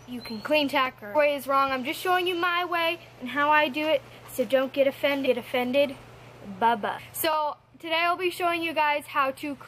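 At 1.14 s and 5.25 s, damaged data in a compressed stream makes the decoder lose frame sync, producing brief glitches heard as a chirp, squawk, click or short hole that appear as thin broadband spectrogram streaks and waveform discontinuities.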